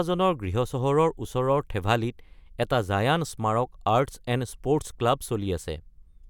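No technical faults can be heard anywhere in the speech. Nothing in the audio points to a problem with how it was captured or delivered.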